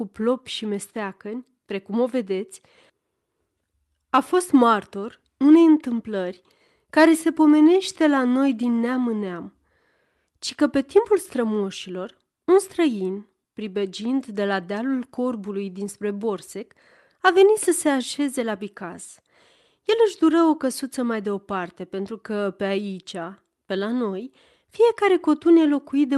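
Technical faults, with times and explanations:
No technical faults can be heard in the speech. It carries the coding texture of a call path, with the top end stopping at about 12 kHz, which fits Opus at a moderate bitrate.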